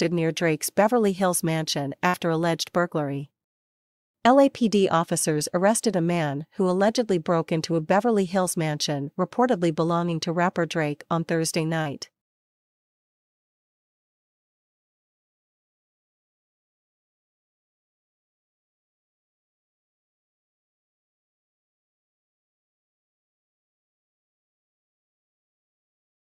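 From 2.07 to 2.16 s the sound freezes into a held, fading tail before jumping ahead. This is a burst of packet loss: roughly 60 ms of audio never arrived, so the receiver stretched the last sound for about 60 ms, then resumed with that stretch missing.

At 11.82 to 11.87 s there is a brief smear, a momentary wobble in the sound. This short concealed packet loss left a hole of about 40 ms, which the decoder bridged by continuing the preceding sound before blending back into the real signal.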